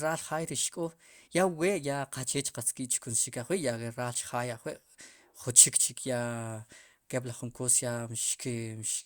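No technical faults are audible anywhere in the speech recording.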